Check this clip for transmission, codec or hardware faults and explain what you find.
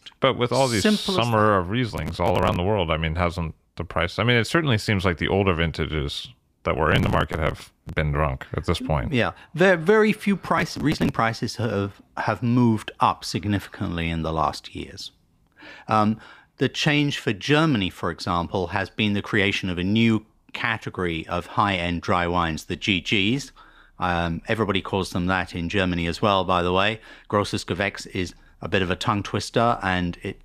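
There is processor overload crackle in three places: from 1.90 to 2.56 s (after "summer of", before "the world I mean"), from 6.92 to 7.93 s (after "older vintages that were", before "been drunk at this"), and from 10.58 to 11.18 s (after "there very few", before "have have moved up"). Each time, dozens of buffers only a few milliseconds long miss their deadline and are simply skipped, so the speech tears into gritty crackle. On a waveform these stretches show many tiny hard-edged gaps. A spectrogram shows them as dense vertical broadband streaks.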